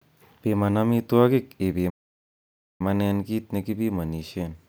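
A speech clip with one playback stall. At 1.89 s the speech stops dead and the output stays silent until 2.81 s, a gap of about 0.9 s. It then carries on. The likely cause is the player running out of buffered data or its thread being blocked.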